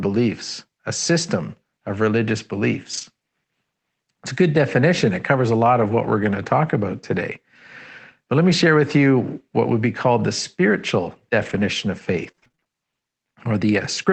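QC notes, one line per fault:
2.93–3.03 s, lost packet rebuilt from error correction: about 60 ms played from a low-bitrate backup copy, so there is no gap but the sound is rougher; the spectrogram shows smeared, noisier texture.
5.83–6.09 s, lost packet rebuilt from error correction: about 140 ms rebuilt from backup copies, with a longer rough, grainy patch that appears as blurred harmonics with a raised noise floor.
9.65–12.67 s, scattered short gaps: around ten brief holes, none longer than about 30 ms, each patched by extending the previous sound, causing ticks and hiccups that show as repeated, stretched waveform slivers.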